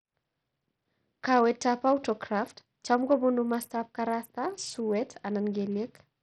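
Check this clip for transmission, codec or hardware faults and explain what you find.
One codec fault runs through the whole clip. The speech sounds dull and gritty, its treble thinning and flickering, with rough noise and aliasing clinging to it. This is likely Bluetooth SBC compression at a starved bit pool, near 64 kbps, leaving upper sub-bands unfunded and quantising the rest coarsely.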